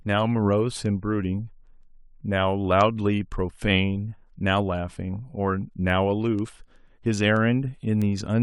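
From about 0.2 s right through to 8.34 s, the speech carries word clock ticks: a steady train of sharp clicks of uneven strength roughly every 0.15 s, around fifty of them in all. The receiving device is running on its own clock rather than locking to the sender's, so each time the two clocks slip past each other a sample gets dropped or doubled. The tick rate suggests a clock mismatch somewhere around 150 ppm.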